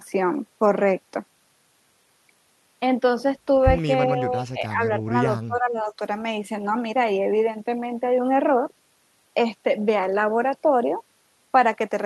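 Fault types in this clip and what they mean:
Speech suppressed in double talk: The speech dips sharply, by roughly 15 dB at its deepest, from 4.07 to 5.13 s and again from 5.47 to 5.99 s. The likely cause is an echo canceller turning down this talker while the far side spoke.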